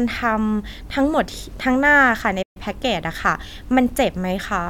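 A playback stall interrupts this speech clip at 2.42 s, cutting the sound to silence mid-flow for about 130 ms until 2.57 s, when it resumes. The likely cause is the player's buffer running dry or its output thread being briefly blocked.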